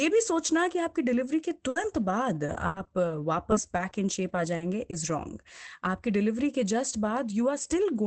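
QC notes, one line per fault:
1.69–4.95 s, repeated packet loss (robotic sound): about ten short holes in the speech, the longest 80 ms, each patched by stretching the sound just before it. Roughly 0.4 s of this stretch is rebuilt rather than real. The back-to-back concealment gives the choppy sound. Unlike a single dropout, the holes recur every few hundred milliseconds. Unlike a stutter, the fill is smeared rather than an exact repeat. The dull top, which stops near 8 kHz, comes from the call codec path.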